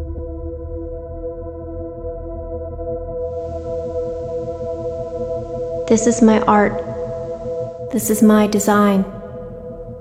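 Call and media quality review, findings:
Digital radio blending to analogue, 3.16 to 7.99 s. A 354 ms cross-fade brings in FM hiss at roughly 40 dB below the signal, with a level shift of about 1 dB, then blends back. Unlike a dropout or concealment, the audio continues through the hybrid receiver's switch.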